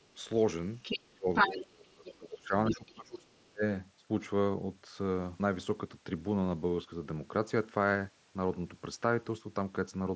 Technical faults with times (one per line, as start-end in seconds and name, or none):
0.02-0.07 other side's voice leaking through
0.82-1.59 other side's voice leaking through
1.10-3.63 speech suppressed in double talk
2.05-2.14 other side's voice leaking through
2.69-2.90 other side's voice leaking through
3.31-3.43 other side's voice leaking through